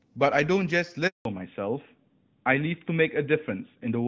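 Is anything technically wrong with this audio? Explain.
Yes, there are two faults, both tied to a network switch partway through the call.

Handover gap, 1.07 to 1.25 s: the call moved between networks, no speech frames arrived, and the audio cuts to silence for about 180 ms.

Fallback to narrowband, from 1.25 s to the end: the band above 4 kHz disappears, fitting a drop from AMR-WB HD Voice to narrowband AMR, so the speech sounds duller.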